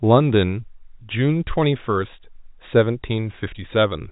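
No technical faults can be heard in the speech, which carries the narrow band of G.711 telephone coding with nothing above about 3.8 kHz and at most a faint level-following grain from the codec.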